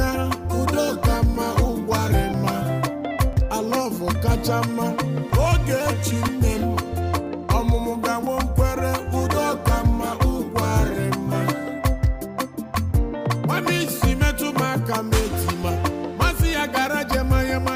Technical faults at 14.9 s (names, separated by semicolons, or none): none